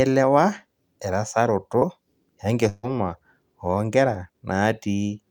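At 1.79 to 1.83 s there is a short concealed packet loss: about 20 ms of the speech stream arrived too late to decode, and the receiver bridged the hole by extending the preceding sound before crossfading back. It is heard as a brief smear or wobble. On a spectrogram the continued sound runs on unnaturally flat for a moment, with a faint seam where real audio resumes.

From 2.69 to 2.85 s a burst of packet loss removes about 140 ms of speech. The decoder kept synthesising from the last sound received and faded it as the gap lengthened, never dropping to silence, so a held buzz or fading hiss replaces the real audio, and the speech picks up again further on with that stretch missing. A spectrogram shows frozen, decaying harmonic bands or smooth noise, and the waveform envelope tapers before an abrupt restart.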